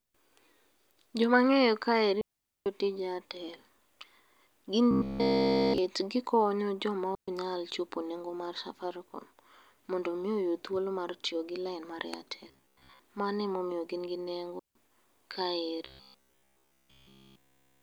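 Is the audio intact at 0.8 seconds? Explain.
Yes, at 0.8 seconds the speech plays through intact, with no dropout, click, distortion or other fault at that point.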